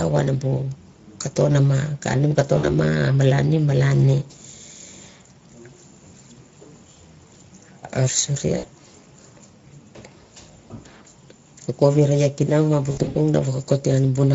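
Throughout, the speech carries plainly audible Speex codec damage: a hoarse, noisy texture from the CELP coder's thin excitation, fitting a middle setting near 16.8 kbps. Unlike the swirling, watery artefacts of transform codecs, this is a grainy, buzz-edged roughness in the voice itself.

At 2.57 s, 8.57 s and 12.91 s, VoIP packet loss concealed by the speech codec breaks in. The decoder stretches its last pitch and filter into a buzzy tone or coloured noise that fades, instead of leaving silent gaps. The first two losses last about 60 ms each. The third scatters 160 ms of loss across roughly 240 ms, ending near 13.17 s, with the sound staying weak afterwards.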